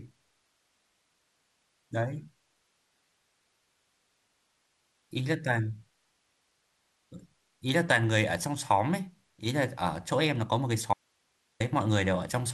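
An audio dropout to a faint residue runs from 10.94 to 11.60 s: the speech vanishes abruptly for about 0.67 s, leaving only hiss some 45 dB below the signal, likely because the feed broke while the path after the break stayed live.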